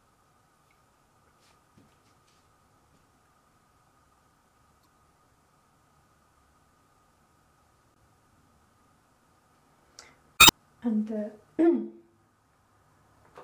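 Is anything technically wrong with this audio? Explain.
Yes. Damaged data in a compressed stream breaks the audio at 4.83–4.86 s, 7.93–7.98 s and 10.36–10.51 s. Corrupted bytes make the decoder misread frames and lose sync until it finds the next valid header, producing brief chirps or squawks, the last one longest.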